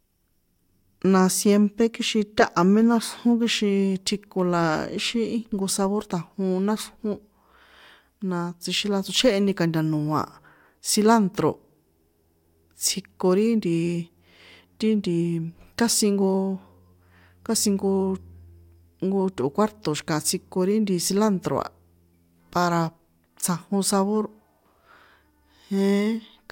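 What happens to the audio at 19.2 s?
Nothing goes wrong at 19.2 s; the speech carries on intact through that point with no audible fault.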